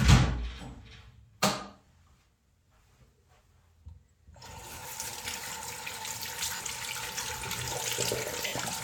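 Brief noisy smears replace the sound at 1.85 s, from 4.73 to 4.85 s (scattered short gaps), from 6.56 to 6.64 s, and from 8.47 to 8.53 s. These are lost LE Audio frames: the LC3 decoder fills each gap by repeating the last spectrum with random signs.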